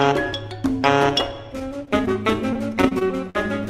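At 1.85 to 1.89 s there is a short stall from a late packet. The jitter buffer ran dry, so the last sound is held for about 21 ms before playback resumes from the same point, now 21 ms later. Unlike a loss, nothing is skipped. It is only a slight drawn-out buzz or dip.

At 2.05 to 2.09 s comes a short concealed packet loss. Here 20 ms of audio never arrived and the gap was bridged with about 12 ms of extrapolated sound, so the material jumps ahead. It is a brief smear or wobble rather than a held sound.

From 2.53 to 3.36 s, repeated packet loss gives a choppy, robotic stretch. Five separate gaps, the longest 44 ms, are each patched by continuing the previous sound, covering about 14 % of the span with roughly 100 ms lost. The recurrence, not one isolated glitch, creates the choppy texture.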